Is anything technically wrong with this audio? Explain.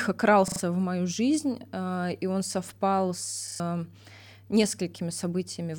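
Yes. At 0.48 to 0.6 s and 3.48 to 3.6 s, a repeated buffer stutters the speech: one 40 ms slice plays three extra times with hard joins, losing about a tenth of a second, unlike a dropout's silence.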